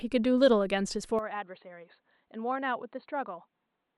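Speech that turns dull and boxy at 1.19 s and stays that way to the end, with nothing above about 4.4 kHz, a level drop of roughly 10 dB, and a faint new background noise well below the voice. No gap occurs at the change. The likely cause is an input switched to a poorer device. A bandwidth-limiting filter or codec change would cut the highs but leave the level and noise floor alone, whereas here all three shift at once.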